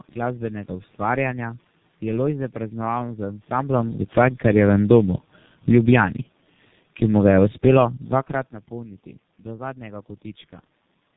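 Throughout, the speech sounds rough, muffled and warbly, with nothing above 3.8 kHz: tandem speech coding, where G.729A at 8 kbit/s and then G.723.1 at 6.3 kbit/s coded the speech in turn across a G.711 A-law link, the G.723.1 coder re-encoding the damage the G.729A coder had already done. From 3.58 to 4.45 s, just after "praznoval z", the level sinks by about 6 dB along with the background, and again from 5.59 to 7.84 s by about 5 dB. This is automatic gain falling, as the gain control judged the input too loud or its background noise too strong and eased its gain down.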